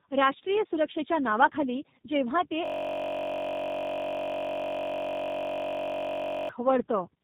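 Tandem speech coding runs throughout: the speech passed through iLBC, then G.711, then G.729A, re-encoded at each stage, so it sounds rough, muffled and warbly, with nothing above 3.8 kHz. From 2.66 to 6.49 s, just after "सुरक्षेच्या नावाखाली जेव्हा ते", a system hang loop sets in. The system froze while the hardware kept replaying one 21.33 ms slice, which fits a 1024-sample buffer, producing a steady 46.9 Hz buzz.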